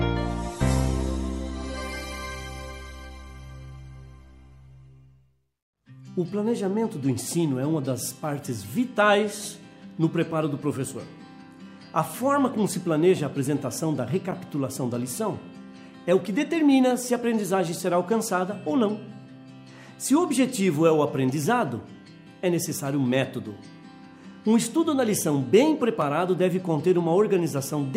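A block of digital silence at 26.02 s drops the signal to zeros for about 1.5 ms, likely because the output buffer was not filled in time. With no fade at either edge, the abrupt cut and return are heard as a single sharp tick.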